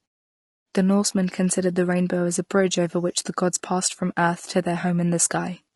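Across the whole clip the speech has a rough, grainy texture. Low-delay AAC compression is the likely cause, most probably AAC-ELD at around 32 kbps, with plainly audible damage. Its short frames cannot separate the pitch harmonics cleanly, so noise fills the gaps between them and the top band sounds thin and synthetic. On a spectrogram the harmonic stripes look blurred, with speckled energy between them and a patchy, smeared upper region.

From 4.81 to 4.84 s, right after "from earth to their", there is AAC frame loss with concealment. About 20 ms of audio is missing, which fits a single lost frame. The decoder covers the gap by reusing the last good spectrum with scrambled phase, so the sound briefly smears into a noisy, phasey blip instead of dropping out. On a spectrogram this shows as a narrow vertical band where the harmonics dissolve into diffuse noise. The waveform shows an envelope that is continuous but loses its fine structure. 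The muted pauses, where the background fades to silence between phrases, are also visible in the waveform.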